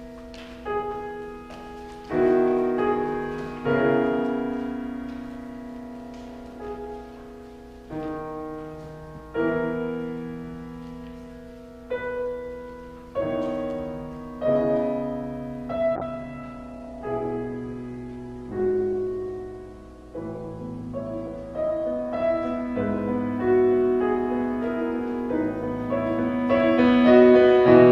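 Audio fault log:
15.96 to 23.57 s, call bitrate drop: the encoder falls to a much lower rate, consistent with roughly 64 down to 15 kbps, for about 5.5 s at its worst. Coarser coding sounds rough and watery. A spectrogram shows content above 12 kHz removed, then restored.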